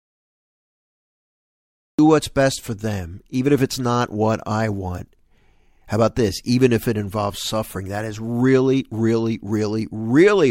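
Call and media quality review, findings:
Cut-off start: digital silence from 0.00 to 1.99 s, then speech enters abruptly mid-sound at 1.99 s with no attack or fade. Probable component: capture or stream start. Recording engaged late, truncating the opening of the utterance rather than beginning cleanly.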